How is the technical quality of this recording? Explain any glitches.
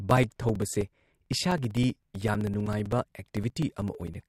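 The recording has a regular ticking fault. From 0.11 to 4.21 s, periodic USB or driver dropouts repeat every 64 ms. A stalled audio path loses a few milliseconds each time, filled with silence, giving steady ticks through the speech.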